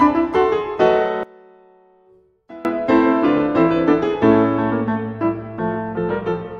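The clip is music. From 1.23 to 2.65 s the level drops by about 21 dB, and the sound collapses into a faint remnant. Anything panned to the centre nearly disappears. The likely cause is one channel inverted. One side of the stereo pair has its polarity flipped. When the channels are summed to mono, the material they share cancels out. Only the difference between the two sides remains audible.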